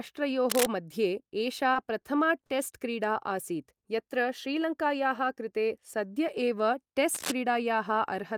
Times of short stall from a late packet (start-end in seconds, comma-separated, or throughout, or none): 1.73-2.05, 2.46-2.52